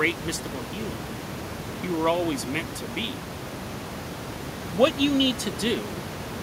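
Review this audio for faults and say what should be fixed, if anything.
Nothing in this audio needs to be fixed, since no faults can be heard.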